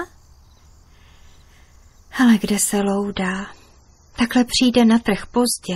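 At 2.78 s the audio drops abruptly to a lower quality and stays there to the end. There is no gap at the switch. This is an adaptive stream at a lower bitrate. The connection slowed, so the player moved to a cheaper encoding. Compression artefacts grow. The change fits a step from roughly 128 kbit/s MP3 down to about 32 kbit/s.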